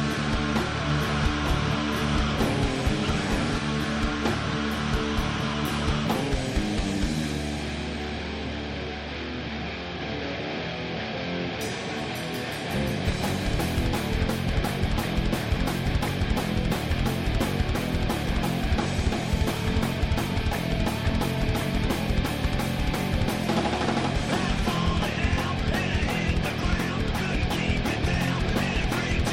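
From 0.90 s to 3.58 s the sound is accompanied by a second, full-band copy of itself trailing about a second behind and roughly 5 dB quieter. It has no decay or room colour, and it cuts in and out abruptly at those edges. This doubled audio track is likely the result of the same signal being captured twice, once through a slower path, or of an edit leaving two misaligned copies overlapping.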